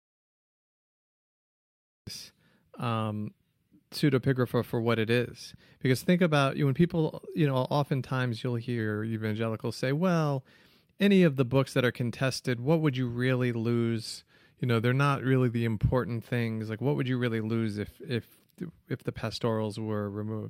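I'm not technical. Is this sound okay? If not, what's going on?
No. There are two separate problems.

The clip opens in an audio dropout to silence. From the very start until 2.07 s there is dead, total silence, with not even background hiss, and then the speech begins mid-flow. That pattern likely means the input was cut off, for example by a loose connection or a mute, while the recorder kept writing empty audio. Whatever was said in those first two seconds is lost.

Twice the speech suddenly slows and drops in pitch, then snaps back to normal. This is a drift correction step. It happens when software that keeps two clocks in sync likely changes the playback rate in one jump. Here the speed falls by about 5.4% and the pitch drops by almost a full semitone. The first step runs from 8.79 to 9.36 s, right after "you know oftentimes you'll" and ending before "say well any of". The second runs from 14.09 to 15.91 s, following "what would you really".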